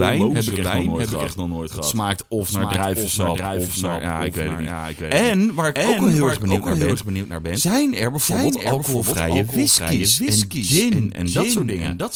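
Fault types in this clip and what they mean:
Doubled audio track, throughout: a second full copy of the speech trails about 0.7 s behind at about 5 dB lower, with no room decay, likely from a slower capture path.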